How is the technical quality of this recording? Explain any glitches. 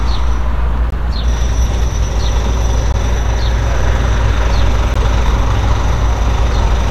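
The recording has three short dropouts. A gap at a join of encoded pieces appears at 0.90–0.92 s, 2.92 s and 4.94 s, every 2.0 s. Separately encoded segments were joined untrimmed, so encoder delay and padding leave 16–21 ms silences with smeared edges before the sound resumes.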